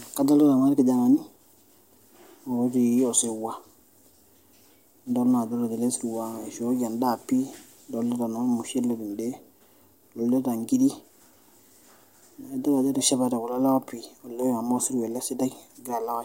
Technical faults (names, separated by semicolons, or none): none